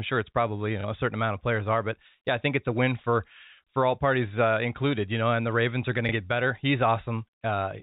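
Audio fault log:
0.81 to 0.84 s and 6.09 to 6.12 s, packet loss with last packet repeated: at each point the speech gives a small 30 ms blip as the receiver replays the preceding chunk to fill the gap, which fits one lost 30 ms packet each time. The replayed segment seldom aligns with the pitch cycle. Unlike a dropout, there is no silence, only a brief repeat of what came before, heard through the 4 kHz telephone band.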